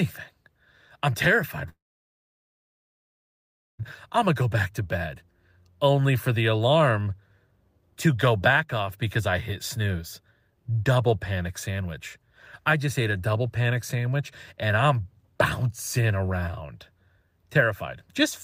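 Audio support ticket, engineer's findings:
Long network dropout, 1.69–3.82 s. Speech cuts; last sound continues briefly as fading buzz, then about 2 s of near-silence. Resumes with roughly 2.1 s of audio missing, not recovered. Likely cause: packet stream interrupted, receiver concealment exhausted, gap filled with silence.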